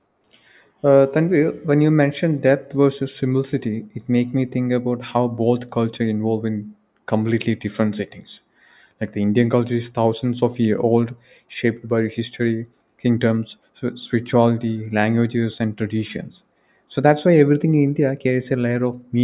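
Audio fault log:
No faults are heard in this speech recording. There is nothing in the signal that calls for a timed entry.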